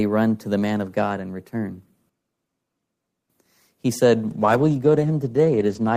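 Speech with two separate faults. From 2.09 to 3.30 s the recording likely switches to a distant microphone, the close one dropping out: the sound turns suddenly roomy and hollow, loses bass, falls about 10 dB in level and reveals room noise roughly 35 dB below the speech, then snaps back. From 4.27 s to the end, a call bitrate drop makes the encoder code far more coarsely, which fits a fall from about 32 kbps to 12 kbps. The sound becomes rough and muffled, with its high frequencies cut, staying at its worst for about 1.57 s.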